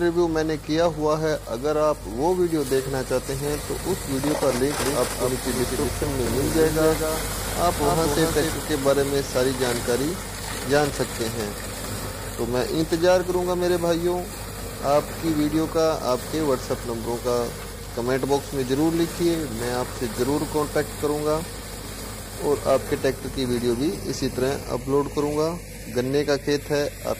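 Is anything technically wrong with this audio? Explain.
Yes. From 4.80 to 8.54 s there is a doubled audio track: a full-band copy trails the original by roughly a fifth of a second, about 5 dB quieter, with no decay or room colour. It likely comes from a second, slower capture path, and it cuts in and out abruptly.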